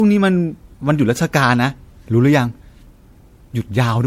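From start to finish the speech carries generation loss: a swirly, hollow, smeared quality with softened consonant attacks, worse than a single pass at what sounds like 64 kbit/s MP3 would give. The likely cause is repeated MP3 decoding and re-encoding, about four times, each pass requantising on a shifted frame grid so errors pile up. A spectrogram shows nothing above 16.5 kHz, plus patchy holes and flickering gaps between harmonics. The waveform shows blurred transients.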